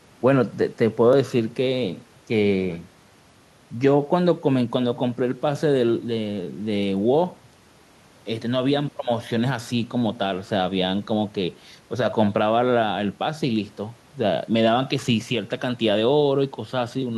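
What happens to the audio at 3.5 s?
Nothing goes wrong at 3.5 s; the speech carries on intact through that point with no dropout, click or distortion to be heard.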